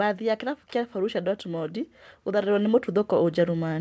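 From 0.19 s onward, speech and background swell together: automatic gain rising, as the gain control judged the input too quiet and lifted it gradually.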